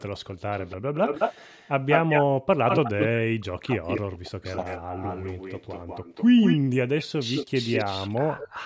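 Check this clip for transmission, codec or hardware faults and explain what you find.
Three call-path problems are audible, all tied to the echo canceller on a loudspeaker call.

Echo leak, 0.0 to 3.05 s and again 3.88 to 8.5 s: a second copy of the speech trails the original by about 199 ms, only about 5 dB quieter. It sounds like a distinct delayed repeat rather than room reverb. The far end's canceller likely failed to subtract what its microphone picked up from its own loudspeaker, so that leftover was sent straight back down the line.

Background gated by the echo canceller, 0.78 to 0.92 s: the room sound beneath the speech briefly collapses, dropping as much as about 40 dB for roughly 150 ms before springing back. The sudden hole in the ambience is the giveaway. While the loudspeaker was active, the canceller's suppressor clamped the microphone down hard, taking the background with it, then released once playback eased.

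Speech suppressed in double talk, 2.55 to 4.86 s: while both sides are talking, the near talker's speech dips and breaks up, losing as much as about 40 dB in places across roughly two seconds of affected sound. It comes through patchy and muffled rather than steadily quiet. The cause is likely the canceller mistaking this talker for loudspeaker echo and attenuating everything it could not separate. The call's normal microphone processing, with nothing above 8 kHz, sits underneath all of this.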